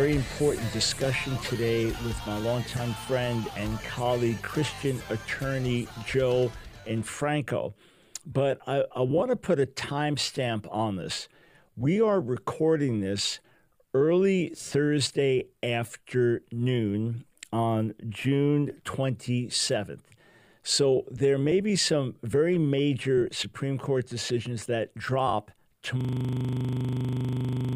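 At 26.01 s a system hang loop takes over and runs to the end of the clip. The machine or its audio driver has frozen while the sound hardware keeps replaying the same 40 ms stretch of its ring buffer, repeating it more than forty times. At 25 repeats per second, the result is a rough, rapid stutter bordering on a buzz. On a waveform the final section shows an identical short shape tiled edge to edge. A spectrogram shows frozen vertical bands spaced 40 ms apart, with harmonics at multiples of 25 Hz.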